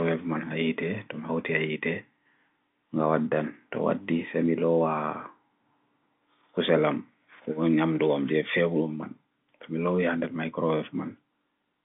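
No technical faults are audible.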